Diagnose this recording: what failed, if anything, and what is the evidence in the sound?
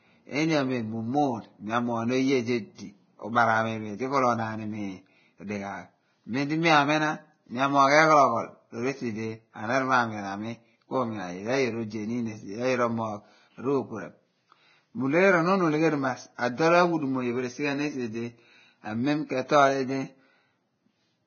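The codec stage failed, most likely heavy Vorbis compression. Throughout the speech nothing survives above 6.6 kHz, and the remaining treble is grainy and hissy, with roughened tones and softened attacks. This points to a very low bitrate, around 18 kbps, where coarse quantisation turns fine detail into noise.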